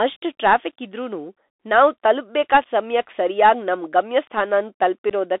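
Throughout the speech, the link runs through the Bluetooth CVSD headset codec, which fits a 64 kbps link that encodes each sample as a single up-or-down step. The band is held to roughly 300 Hz to 3.6 kHz, s sounds come out scratchy, loud peaks distort, and a grainy hiss sits beneath everything.

At 5.10 s, unconcealed Bluetooth headset packet loss drops a few voice packets, and about 11 ms of audio goes missing with nothing filling the gap. The result is a brief, hard-edged hole, with the speech returning quieter for a moment.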